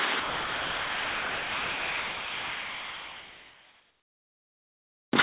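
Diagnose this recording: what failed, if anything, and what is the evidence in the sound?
What failed is in the call processing stage: from 0.2 s to about 5.12 s the actual sound gives way to a bed of steady, featureless noise. Roughly 3.2 s of real sound goes missing inside that stretch. The likely cause is sound dropped by the voice detector: the sender judged this non-speech material to be background, stopped transmitting, and the receiver filled the gap with generated comfort noise. Everything heard stops short of 4 kHz, which fits a narrowband call codec.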